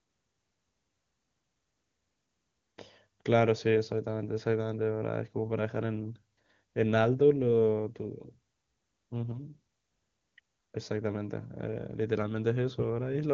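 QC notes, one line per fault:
No faults found; the speech runs through the AMR wideband (HD Voice) codec with nothing above 7.3 kHz, and its clarity fits the codec's highest rate of 23.85 kbit/s.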